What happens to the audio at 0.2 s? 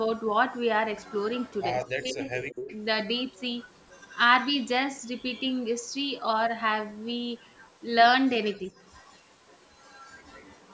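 Nothing goes wrong at 0.2 s: the speech passes through intact, with only the normal trimming of the lowest bass from call microphone processing and nothing above 8 kHz.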